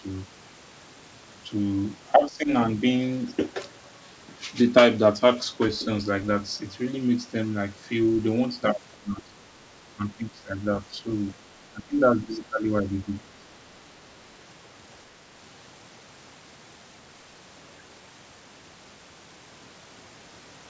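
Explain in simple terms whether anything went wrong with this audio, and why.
The talker's level drops sharply in short bursts at 2.15–2.5 s, 8.96–9.35 s, 9.93–10.59 s, 11.73–11.99 s, 12.17–12.3 s, 12.48–12.65 s and 12.83–13.45 s, each lasting a fraction of a second. This is speech suppressed in double talk, likely because both ends spoke at once and the echo canceller, unable to tell this talker apart from loudspeaker echo, turned everything down together. The sound tops out near 8 kHz, as expected for this call codec.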